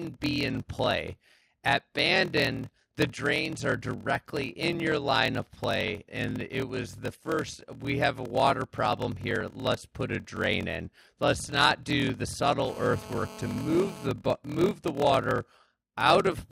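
A block size mismatch (padded) runs through the whole speech clip. One stage hands over shorter blocks than the next expects, which fits 1024-sample blocks, and the shortfall is zero-filled. The result is a steady 41.7 Hz buzz, with the speech slowed to 0.889 of normal speed while keeping its timbre.

From 12.66 to 14.07 s, between "not do the" and "move the water out", a nearby 2G handset on a call couples its 216.7 Hz transmission bursts into the audio circuitry. This GSM phone buzz is a steady, harsh, harmonic-rich rasp about 16 dB below the speech.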